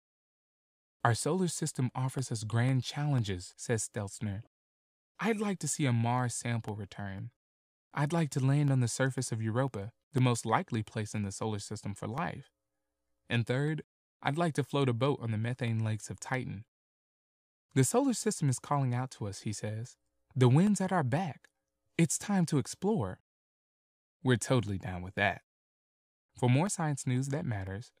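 From 0.19 s to 27.67 s, periodic USB or driver dropouts recur every 0.5 s, about fifty in all. Each time, something blocks the audio path and roughly half a millisecond is replaced by silence. The result is a steady ticking.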